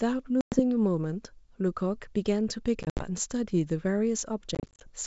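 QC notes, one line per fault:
0.41–0.60 s, 2.83–3.02 s, 4.55–4.90 s: packet loss on an ADPCM call. About 110, 110 and 150 ms are cut to hard-edged silence, the later two as scattered gaps. On resuming, the decoder's predictor and step size mismatch the sender's, so the speech returns slightly distorted.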